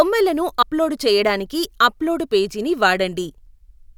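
At 0.62 s, just before "అప్లోడు చెయ్యడానికి అప్లోడు పేజీ", compressed frames skipped: about two 32 ms frames drop out, roughly 70 ms of speech.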